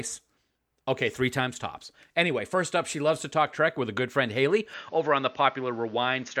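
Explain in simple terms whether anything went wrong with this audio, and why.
At 4.74 seconds the speech suddenly turns duller and flatter, with a faint new background noise. The likely cause is the input switched to a poorer device. Unlike a simple filter, it brings its own noise and tone, with no gap or loudness jump.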